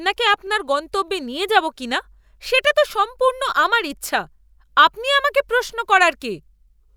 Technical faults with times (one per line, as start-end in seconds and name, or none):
0.47 repeated buffer